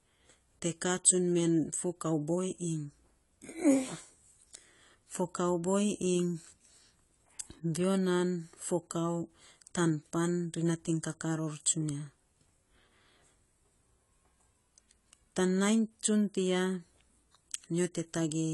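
AAC compression runs throughout the speech. Nothing sounds above 11.5 kHz, and the plainly audible damage leaves it dull and smeared. That points to a low-bitrate AAC-LC encode, likely near 32 kbps, which discards high bands and coarsely quantises the rest.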